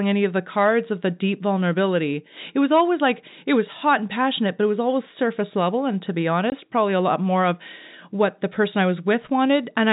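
At 6.5 s, between "level and to be" and "probably a lot more", a packet went missing and the receiver filled the gap with silence. This is packet loss filled with silence. The result is a 20 ms hole with hard edges, which fits a single lost packet, cutting through the telephone-band sound of the G.711 coding.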